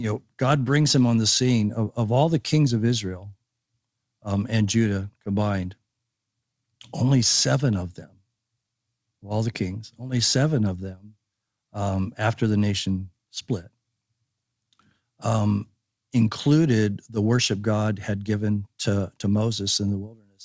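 Nothing stood out on listening to this speech as it came through the call path, which carries nothing above about 8 kHz.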